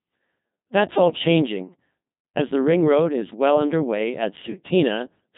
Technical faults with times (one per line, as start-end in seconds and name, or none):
0.00-5.38 Codec 2 vocoder